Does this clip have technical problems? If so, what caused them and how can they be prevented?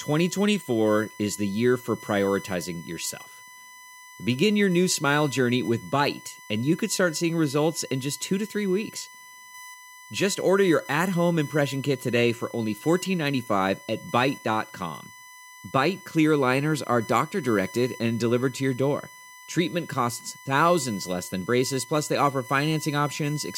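Yes. USB whine runs throughout: a steady 1 kHz tone, loudest at 2 kHz, roughly 20 dB below the speech, from 1 ms bus frames leaking through power or ground. A USB isolator, a powered hub, or a cleanly powered audio interface prevents it.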